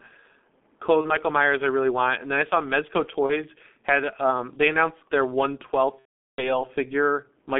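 Throughout the clip, the speech has passed through the G.723.1 codec. The sound is muffled and hoarse, with consonants smeared, and the damage is heavy. That fits the 6.3 kbit/s mode, where the codec's vocal-tract model is refreshed only once per 30 ms frame. On a spectrogram, energy stops sharply below 200 Hz and above 3.5 kHz, and the formant bands look blocky in 30 ms steps instead of gliding.

From 1.01 to 1.17 s and again from 3.26 to 3.44 s, VoIP packet loss is concealed by the speech codec. Each event loses one 30 ms frame. The decoder repeats its last pitch and filter at falling gain, so a brief hold of the last sound is heard, and the sound stays thin until about 130 to 150 ms after the gap. On a spectrogram, the last spectrum continues through the gap. In the waveform, the amplitude dips and then slowly recovers.

From 5.99 to 6.64 s, the same concealment covers a much longer loss of 390 ms, which fits about thirteen consecutive frames. 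The sound is stretched briefly and fades, then is muted from the third lost frame. The waveform shows a short shrinking envelope, then silence. The spectrogram shows a frozen spectrum that weakens briefly, then a blank gap before normal speech patterns return.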